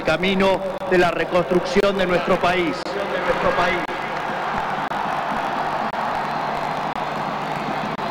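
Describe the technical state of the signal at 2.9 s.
A gap between chunks sits just before that point, from 2.83 to 2.85 s: playback stalls for about 25 ms at a chunk join, leaving a hard-edged hole, seen as a flat waveform and blank spectrogram column.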